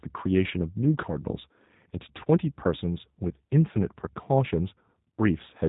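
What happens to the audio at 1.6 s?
At 1.6 s the speech is passing through G.729 coding, as it is for the whole clip. The codec rebuilds each 10 ms frame from a vocal tract model, pitch prediction and sparse pulses, consistent with an 8 kbit/s stream, and cuts everything above 4 kHz, leaving the speech muffled, rough and plainly synthetic.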